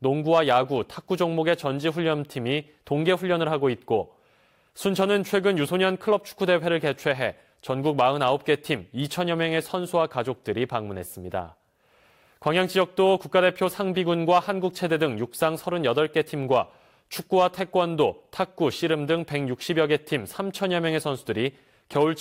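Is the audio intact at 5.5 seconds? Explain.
Yes, the audio is intact at 5.5 seconds, with nothing breaking up, cutting out or distorting at that point.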